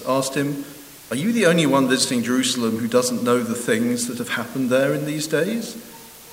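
From start to finish the audio carries low bit depth with dither: only 7 bits are used, with dither randomising the rounding error into a constant, even hiss roughly 20 dB below the signal, without distortion. A spectrogram shows a flat noise floor across all frequencies; the waveform appears fuzzy.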